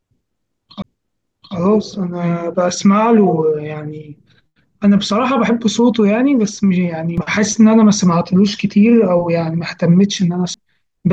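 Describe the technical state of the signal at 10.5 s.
A tick at 10.54 s, with a mute of a couple of milliseconds, and the speech resumes from a different point: a CD skip, where the laser jumped to another turn of the disc's spiral.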